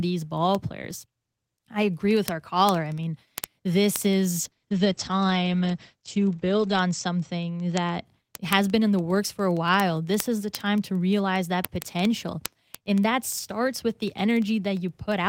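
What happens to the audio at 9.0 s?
At 9.0 s you're right in the middle of word clock ticks, which run from about 0.14 s all the way to the end. A digital link is being read by a device on its own clock that isn't locked to the sender's. The two clocks are off by something like a few hundred parts per million, and every time they slip past each other one sample gets dropped or repeated. That produces a tick roughly every 50 ms, a steady fast ticking under the speech.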